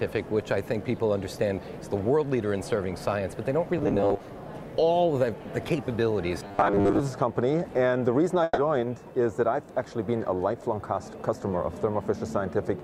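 The audio has two stretches of robotic sound from repeated short buffers, at 3.78–4.21 s and 6.45–7.00 s. A rigid 100 Hz buzz, likely from 10 ms buffers being replayed, covers roughly half and then most of the sound. A spectrogram shows even 100 Hz harmonic stripes, and the waveform repeats every 10 ms. A burst of packet loss at 8.43–8.59 s is filled with 140 ms of fading continuation, with 10 ms of silence. In that span, 140 ms of audio is missing. It appears as a smeared, decaying band before an abrupt restart.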